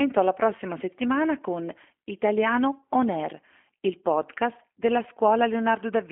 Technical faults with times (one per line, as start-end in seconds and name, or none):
0.00-6.11 G.729 codec